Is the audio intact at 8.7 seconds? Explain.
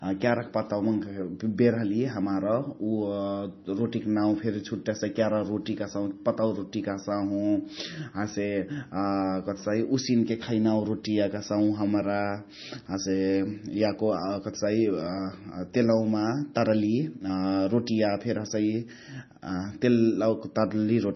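No. Heavy MP3 compression runs through the whole clip, including 8.7 seconds. Nothing survives above about 5.9 kHz, so the speech sounds dull, and weak frequency lines flicker on and off between frames into a watery swirl. This is likely a very low bitrate, around 24 kbps.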